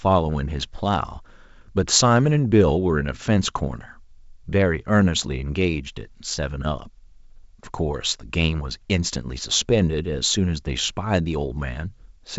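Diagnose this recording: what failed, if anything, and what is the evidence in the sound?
No failure detected anywhere.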